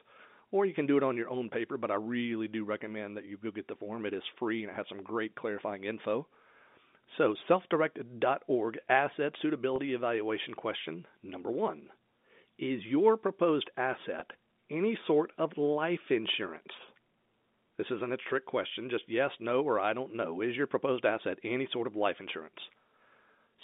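A single 20 ms packet went missing twice, at 9.76 to 9.78 s, just before "evaluation question number one", and at 14.20 to 14.22 s, between "your proposed" and "any sort of life". Each time the receiver filled the hole by repeating the last pitch period. That is packet loss with pitch repetition, heard as a brief held, buzzy tone in place of the lost sound, over the band-limited G.711 telephone line.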